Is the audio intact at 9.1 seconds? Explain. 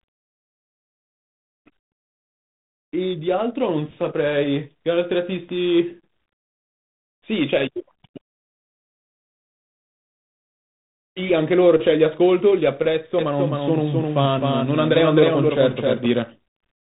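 No. At 9.1 seconds the speech carries tandem speech coding, which runs through the whole clip. It sounds as if it was coded, decoded and coded again across links with different codecs, which fits G.726 32 kbit/s through a G.711 mu-law hop and back into G.726. The second coder works on the first one's errors, so the result is rougher and noisier, with nothing above 3.8 kHz.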